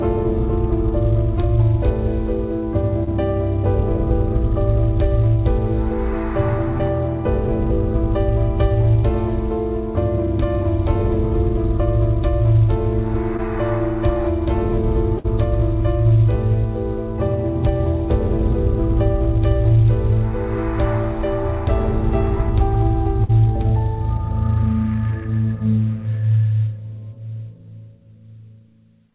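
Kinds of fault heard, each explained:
Short concealed packet loss: Brief slivers of the stream arrived too late to decode, so the receiver patched each hole by extending the preceding sound and crossfading back. At 3.04 s about 25 ms is synthesised and at 13.37 s about 17 ms, each heard as a tiny smear or wobble. A spectrogram shows a short stretch of smoothed, repeated harmonics or flat noise where fine detail should be, and the waveform shows a slight seam at each join.
Burst of packet loss: Several consecutive packets went missing, so the receiver extended the last sound for longer while lowering its level, then resumed with audio skipped. From 15.18 to 15.26 s about 58 ms is filled in place of 60 ms lost, and from 23.24 to 23.31 s about 48 ms replaces 40 ms. Each is heard as a brief held buzz or fading hiss followed by a jump. The waveform shows a tapering, periodic stretch, and the spectrogram shows frozen, fading bands, all within the band below 4 kHz that the call path leaves.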